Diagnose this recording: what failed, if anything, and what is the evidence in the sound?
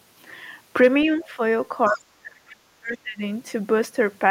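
Speech suppressed in double talk, in the call processing stage: the level sags slightly from 1.07 to 1.4 s, then falls deeply from 1.88 to 3.21 s. On a waveform the envelope collapses. The likely cause is an echo canceller that mistook the talker for echo while both sides spoke and attenuated everything.

Other side's voice leaking through, also in call processing: from 1.85 to 2.01 s a faint second voice sits far below the main speech. On a spectrogram it appears as a weak, separate harmonic trace, which fits residual loudspeaker echo the canceller failed to subtract from the microphone.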